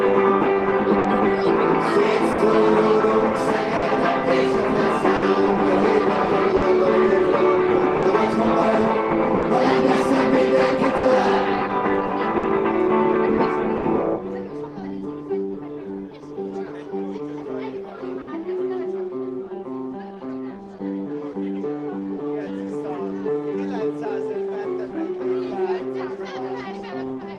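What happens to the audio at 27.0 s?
The sender's clock runs about 4% slower than the receiver's, so at 27.0 s there is still clock drift between sender and receiver: the jitter buffer keeps draining, and the receiver has to fill gaps to keep playback going. The audio carries faint timing hiccups instead of a steady flow.

The receiver's repeated timing corrections, running from 0.54 s to the end of the clip, are still active at 27.0 s. By repeating short pieces, they slow the audio to 98% speed and add about half a second overall, heard as a slightly dragging, unsteady tempo.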